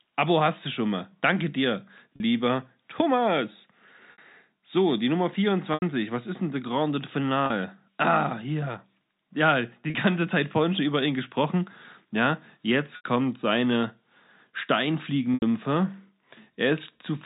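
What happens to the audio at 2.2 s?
Packet loss with pitch repetition occurs from 2.16 to 2.20 s. About 40 ms of audio went missing, which fits two 20 ms packets, and the receiver filled the gap by repeating the last pitch cycle. The speech briefly sounds held and slightly buzzy.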